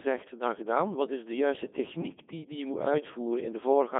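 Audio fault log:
throughout, Codec 2 vocoder: the speech was reduced to pitch, voicing, energy and a spectral envelope, at a rate that fits about 2.4 kbit/s, then rebuilt from sine waves. It sounds heavily robotic and buzzy, held within 200 Hz to 3.5 kHz, with nothing above 3.6 kHz.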